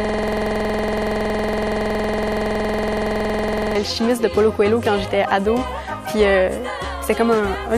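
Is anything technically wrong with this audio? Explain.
Yes. A system hang loop runs from the start to 3.75 s: with the system frozen, hardware replays one 46.44 ms buffer, likely 2048 samples, as a rough 21.5 Hz buzz.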